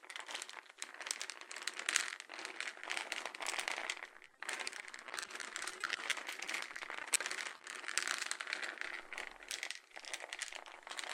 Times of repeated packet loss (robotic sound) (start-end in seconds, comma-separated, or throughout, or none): 4.25-7.64